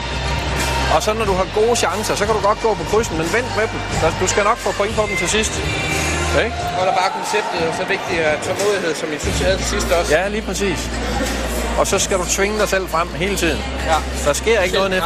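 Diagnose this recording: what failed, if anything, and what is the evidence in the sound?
Nothing failed here as far as I can hear: no stage in the chain gives itself away, and there's no moment in the sound that points to a problem anywhere.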